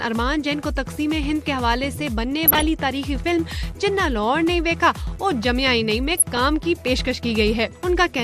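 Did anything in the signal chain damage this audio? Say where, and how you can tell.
Yes. Throughout, the sound is dull and gurgling, with granular grit. This is likely MP2 compression at the codec stage, starving upper sub-bands, which fits roughly 80 kbps.

From 2.46 to 2.67 s and 6.17 to 6.38 s, short blips of noise appear in single sub-bands. This is DAB burbling: reception bit errors corrupt sub-band levels frame by frame.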